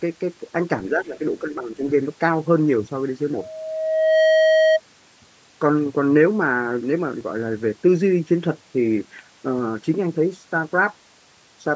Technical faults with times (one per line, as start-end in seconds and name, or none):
0.91-1.87 speech suppressed in double talk
3.34-4.80 loudspeaker feedback squeal
7.21 DC step